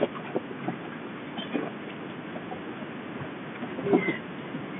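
Listening to this speech carried over G.711 telephone coding, with its line band of roughly 150 Hz to 3.5 kHz and nothing above about 3.7 kHz, nothing stood out.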